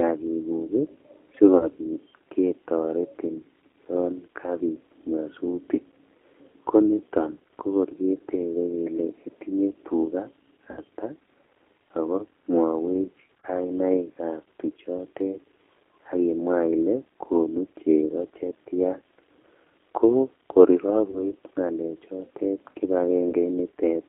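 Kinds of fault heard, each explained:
G.729 codec, throughout the clip: the speech is carried by a low-rate coder that rebuilds each short frame from a vocal-tract filter, a pitch predictor and a handful of pulses, rather than the waveform itself. The sound is held to a narrow 300 Hz to 3.5 kHz line band and has a plainly audible rough, synthetic edge, which fits an 8 kbit/s G.729A coder.
VoIP packet loss concealed by the speech codec, at 1.58, 10.71, 13.40, 21.10 and 23.30 s: stretches of about 30 ms, and about 60 ms at 10.71 s after "kokor ketebekele itinye tugaa", went missing. The decoder filled them by extending its last pitch and filter settings at falling gain, giving a brief buzzy or noisy, fading smear. At 13.40 s the smear sits between "ako mwowech" and "kainaikab tuchotet", and the sound stays weak or distorted briefly after each gap.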